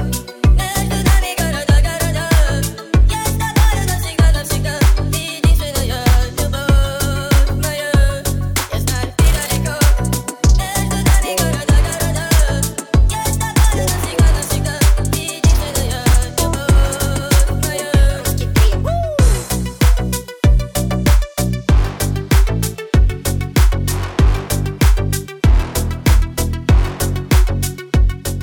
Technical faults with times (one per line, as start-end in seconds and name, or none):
none